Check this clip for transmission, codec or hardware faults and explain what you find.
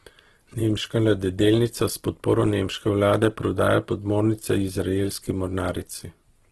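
One codec fault runs through the whole clip: Opus compression. Nothing is heard above 12.3 kHz. The speech sounds rough, grainy and noisy rather than swirly. Short of bits, the encoder keeps each band's energy but fills its detail by folding lower bands or injecting noise. The heavy damage fits a low rate near 12 kbps, likely in Opus's CELT mode.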